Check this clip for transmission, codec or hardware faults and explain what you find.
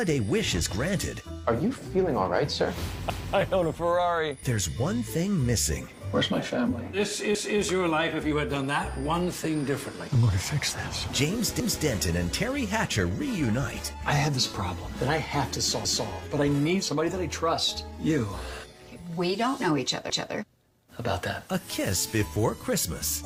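Three faults stand out: a sender-receiver clock mismatch, the constant small timing corrections it forces, and a recurring stutter from overlapping chunks.

The clock drift between sender and receiver is heard as a faint unsteadiness running through the whole clip. The sender's clock runs fast, by around 4 percent. Samples arrive quicker than the receiver plays them out, so its jitter buffer keeps filling. It has to throw material away to stop the backlog growing, and those discards are the small hiccups that recur for the whole clip.

The repeated timing corrections run from about 0.08 s to the end. They sound like slight jumps and an uneven tempo, with the audio pushed forward at about 104 percent of normal pace. Every correction goes the same way: a small piece is cut to catch up with the fast sender. Each cut is tiny, and the cuts land at irregular intervals, so the result is a restless flow rather than obvious gaps.

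The overlapping chunks are heard as a stutter at 3.10, 7.35, 11.60, 15.85 and 20.10 s, where about 250 ms of audio plays twice. The audio was handled in 4-second chunks, and each chunk began before the previous one had finished. At every join the overlap is played again, giving a jolt and a short repeat. These repeats come at steady, evenly spaced points, unlike the scattered drift corrections.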